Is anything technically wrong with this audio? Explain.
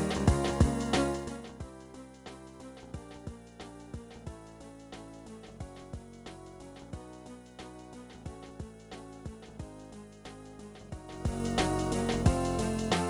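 Yes. Zipper noise appears from 11.04 to 11.44 s, while the level changes by roughly 20 dB. The gain is being changed in discrete 2 dB jumps, about thirty times a second, with no smoothing between them. Each jump puts a small discontinuity into the waveform, so instead of a clean fade the sound carries a rapid ticking, zipping texture for that short stretch.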